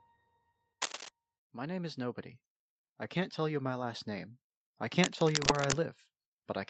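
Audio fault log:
0.82–1.09 s and 5.03–5.77 s: cable scratch noise. Dense, uneven bursts of scratching and rustling sit over the speech, roughly 5 dB louder than it. A worn cable or connector being moved is the likely cause. Its contact resistance jumps rapidly, adding noise.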